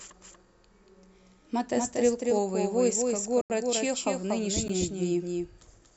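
A doubled audio track runs through the whole of this speech recording. A second full-band copy trails the original by about a fifth of a second at roughly 5 dB lower, with no decay or room colour, so every syllable gets a flat, hard echo. The likely cause is the signal being captured twice, once through a slower path, or an edit leaving two copies out of alignment. A block of digital silence cuts in from 3.41 to 3.50 s, an 85 ms hole whose length fits a 4096-sample buffer. A second one, only 12 ms long, appears at 4.68 s. In both cases the sound cut out and back without any fade, so the first is heard as a short gap and the second as a tick.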